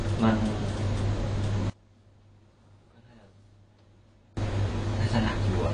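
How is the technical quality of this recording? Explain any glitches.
Technical quality is poor, with two faults. Throughout, the speech is dull and smeared with nothing above 9.8 kHz, plainly audible damage that likely comes from AAC compression; the band-limiting and texture fit a low bitrate around 32 kbps. From 1.70 s to 4.37 s, an audio dropout to a faint residue leaves the signal about 30 dB down for roughly 2.7 s, likely a signal loss while the downstream path stayed live.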